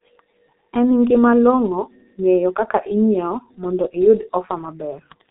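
From start to finish the speech carries heavy G.723.1 codec damage: its slow 30 ms frames, at a rate that points to about 6.3 kbit/s, leave it muffled and hoarse with smeared consonants. A spectrogram shows energy confined to 200 Hz to 3.7 kHz, and nothing above 3.8 kHz.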